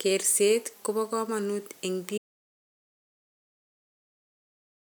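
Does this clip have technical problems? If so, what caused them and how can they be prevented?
Yes, there's an audio dropout to silence. Right after "kobo komonuut eng'" the speech cuts off at 2.18 s and never returns, leaving dead silence with no room tone all the way to the end at 4.83 s. That flat nothing points to the input vanishing while the recorder kept writing silence, most likely from a disconnected mic, a failed link or an accidental mute. To prevent it, secure connections and watch input meters during recording.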